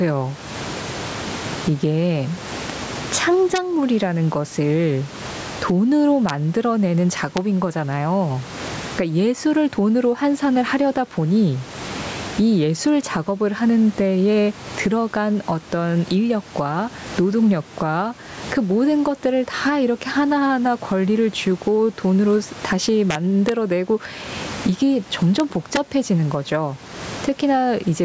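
Speech recorded through a call's microphone path, with sound cut off above 8 kHz and room noise sitting about 29 dB below the voice, carries gain pumping across the whole clip. The level swings by around 20 dB. That points to a mic gain set far too high, likely with a fast limiter or compressor clamping each peak and releasing in the gaps. Unlike a noise gate, which silences the pauses, this lifts the background in them, and the speech comes out flattened and squashed. There are also integer overflow cracks at 3.56–3.58 s, 6.29 s, 7.37 s, 23.11–23.49 s, 25.40 s and 25.76 s. At these points the signal peaks reach or exceed full scale by up to about 1 dB, and instead of being held at the limit the samples wrap around to the opposite extreme. Clipping only flattens the tops of the waveform, but here each overshoot flips across the entire range. That produces violent, sharp snaps far harsher than clipping distortion.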